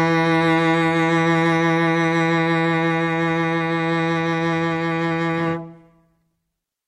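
No technical faults can be heard at any point in this music.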